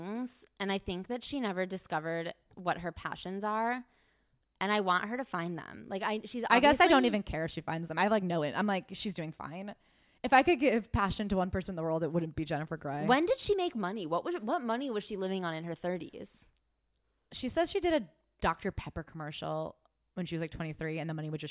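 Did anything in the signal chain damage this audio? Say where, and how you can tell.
No, nothing in this recording stood out on listening as damage from any stage of the signal chain.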